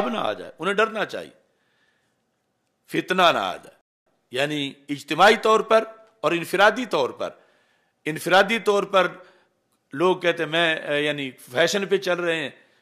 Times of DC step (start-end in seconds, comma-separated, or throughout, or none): none